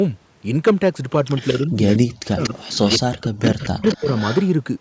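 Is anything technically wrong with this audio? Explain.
Yes, there are two faults.

Echo leak: at 1.36–1.66 s, 1.90–1.98 s, 2.42–2.50 s, 2.68–2.98 s and 3.4–4.48 s, a copy of the speech trails it by 233 ms. It sits about 20 dB below the speech in the first stretch, about 10 dB below in the next three, and about 15 dB below in the last. The likely cause is a far end playing the call on a loudspeaker, where the echo canceller let part of the returning sound slip back.

Speech suppressed in double talk: at 1.67–1.86 s, 2.02–2.59 s and 2.99–4.08 s, the speech sinks while both sides are talking at once. The dips reach about 30 dB in the first stretch and about 40 dB in the later two, across roughly 200, 500 and 700 ms. This is likely the echo canceller failing to separate the talker from the loudspeaker echo and turning both down.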